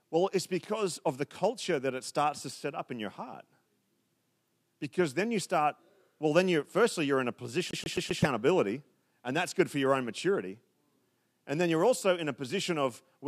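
Right after "firstly you're in a", from 7.71 to 8.23 s, the CD is stuck on one turn: the same 130 ms fragment repeats four times, each jump marked by a brief mute.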